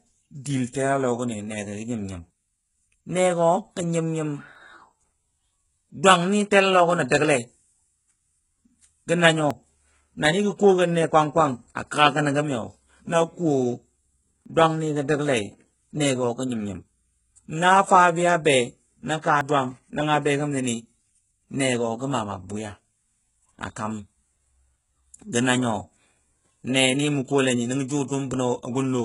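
From the start, the speech carries heavy damage, likely from HE-AAC compression at a very low bitrate, around 12 kbps. The treble is rebuilt by copying lower bands upward, so s sounds turn gritty and lispy. A spectrogram shows blurry, repeated upper-band texture and nothing above 11.1 kHz.

At 4.55, 9.51, 14.46, 19.41 and 24.36 s, roughly every 5 seconds, about 50 ms vanishes as the recording likely hands off between chunks, leaving audio missing between chunks. Each is heard as a small skip, and the waveform shows an abrupt splice with no silent gap.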